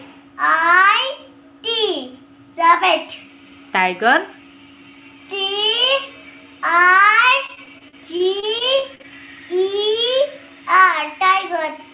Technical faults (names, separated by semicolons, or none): repeated packet loss (robotic sound)